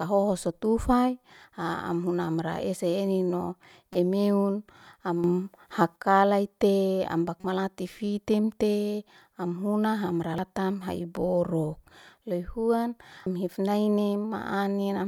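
At 3.93 to 3.96 s, just after "amra ese ennin no", there is a short glitch from damaged data in the compressed stream. A few bytes were corrupt, so the decoder misread the frame, lost sync and skipped ahead to the next valid header.

From 5.24 to 5.96 s the speech and the background noise rise together by about 8 dB, then drop back. The step is abrupt, with no fade. This is most likely a sudden gain jump, where a digital gain change was applied from one sample to the next without a ramp.

The same stream damage returns at 7.41 to 7.44 s as another blip. It appears again as very brief glitches at 10.38 s, just before "ha'i borok lehuan", and at 13.26 s, just after it. Each time the decoder drops the bad data and resynchronises, leaving a small discontinuity.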